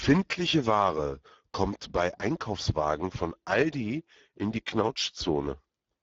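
Speex codec damage runs through the whole clip, from start to finish. Speex is a CELP coder that models speech with a vocal-tract filter and a coded excitation signal. Here the excitation gets too few bits, so the speech sounds plainly grainy and hoarse. The degradation points to a low setting of roughly 10 kbps. Nothing is present above about 7.8 kHz, which gives a wideband-call dullness.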